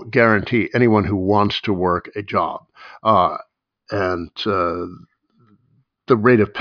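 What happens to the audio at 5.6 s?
Nothing goes wrong at 5.6 s; the speech carries on intact through that moment.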